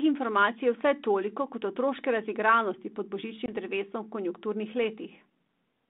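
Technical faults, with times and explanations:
3.46–3.53 s, packet loss on an ADPCM call: a hard-edged silent hole of about 20 ms, roughly one packet, then brief slight distortion as the decoder's predictor and step size recover. That recovery, absent in plain dropouts, marks the 32 kbit/s G.726 link.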